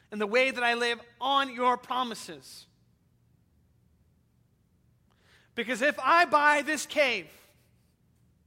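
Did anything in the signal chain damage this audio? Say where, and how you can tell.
No, nothing along the chain has left a mark on this one; there's nothing in it that points to any stage going wrong.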